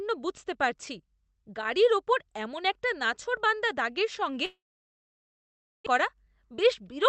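From 4.45 to 5.88 s the speech drops out: a brief fading buzz, then about 1.3 s of near-silence, a flat gap in the waveform and a blank spectrogram band. This is likely a long network dropout, losing about 1 s of audio.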